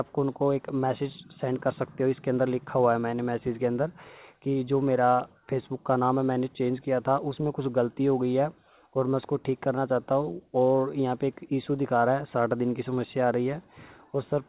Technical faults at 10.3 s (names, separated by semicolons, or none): none